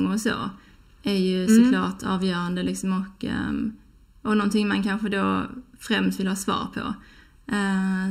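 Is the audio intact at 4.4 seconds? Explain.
No. At 4.4 seconds the speech has channel delay (comb filtering), present throughout. One channel lags by just under a millisecond, so summing to mono cancels shared content at evenly spaced frequencies, starting near 700 Hz, leaving the voice hollow and phasey.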